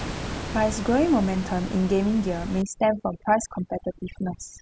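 From 2.62 s to the end, overdone noise removal sets in. Bands near the room noise are cut hard. The background drops and breaks up into twinkling specks.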